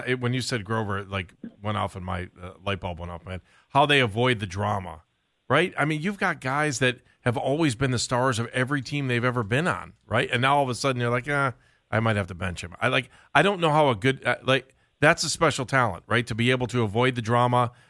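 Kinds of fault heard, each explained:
Nothing here calls for a fault entry, since listening across the whole speech recording turns up no technical problems at all.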